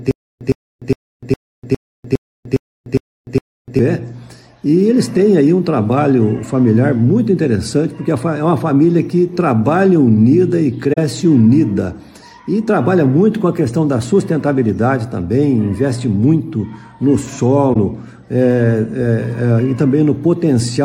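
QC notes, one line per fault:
0.00–3.79 s, stutter with silent gaps: the clip opens already stuck. The same 110 ms burst plays, then roughly 300 ms of dead digital silence, then the burst comes back, on an even 409 ms cycle, nine times over. That's the likely result of a stalled player or stream: each retry replays the last fragment it had, then runs dry. Whatever audio belonged in those gaps is gone, not just delayed.
10.93–10.98 s and 17.73–17.76 s, AAC frame loss with muting: a short soft-edged hole and then a brief dip where the sound dips out and back in. The first drops about 43 ms, the second about 21 ms, which fits losing two frames and then one, at roughly 21 ms per frame. The decoder zeroed the missing frames' spectrum, and the overlapping windows smear the edges into a quick fade instead of a hard cut.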